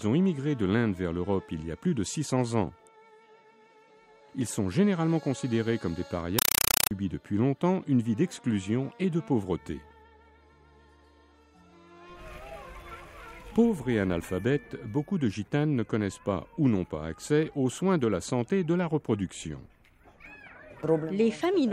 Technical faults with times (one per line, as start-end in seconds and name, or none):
6.39-6.91 compressed stream played as audio